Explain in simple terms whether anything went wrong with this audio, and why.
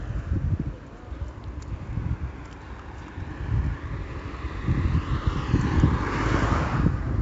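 Heavy 4-bit ADPCM compression runs throughout: a gritty hiss rides on every loud sound and fades when things go quiet, unlike steady background noise. Everything above 7.8 kHz is also missing, so the sound is dull.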